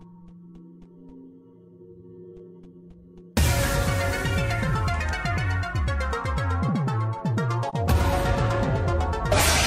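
A brief soft-edged gap at 7.69 to 7.75 s marks AAC frame loss with muting, likely a single lost frame of about 42.7 ms, faded out and in.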